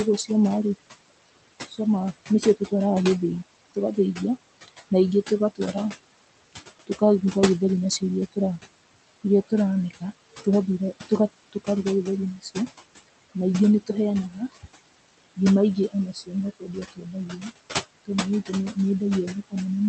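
Noise suppressor artifacts run through the whole clip. The room noise sits about 12 dB below the speech, and the suppressor pulls it down by about 18 dB between phrases. The noise sinks between the words and rises under them.

Speech cut by the noise suppressor occurs from 1.44 to 2.72 s, from 3.69 to 8.37 s, and from 9.49 to 19.53 s. The suppressor mistakes quiet speech for noise and lowers it by up to about 20 dB. Soft sounds and endings come out swallowed. This affects a fraction of a second in the first two spans and about a second in total in the last. The coding noise and the 8 kHz top end fit a 24 kbps Opus call path.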